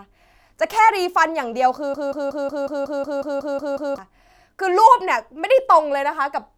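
A stalled player, encoder or stream likely left the system resending the last fragment it held, and the result in this speech clip is a broken-record loop from 1.94 s to 3.98 s. A slice of about 183 ms repeats exactly, back to back, eleven times, giving a stutter of identical fragments. Whatever speech belonged in those two seconds is gone, and normal audio resumes only after 3.98 s.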